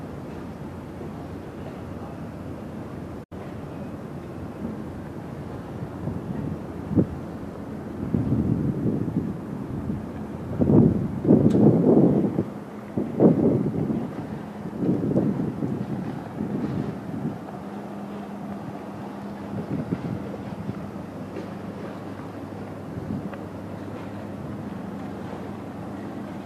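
A digital broadcast dropout mutes the audio from 3.23 to 3.32 s with a quick 8 ms fade, losing about 72 ms, consistent with roughly three corrupted frames.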